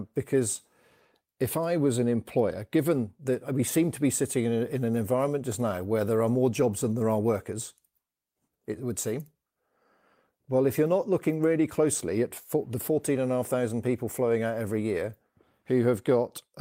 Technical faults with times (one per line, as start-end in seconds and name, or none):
none